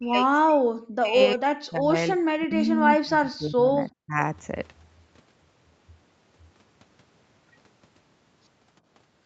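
Speech suppressed in double talk, from 0 to 1.96 s, 2.15 to 3.8 s and 4.05 to 4.18 s: the speech sinks sharply in level and breaks up in pieces, by about 40 dB at its deepest in the first and last stretches and about 25 dB in the middle one. The likely cause is an echo canceller that, with both sides talking, could not separate the near talker from loudspeaker echo and turned both down.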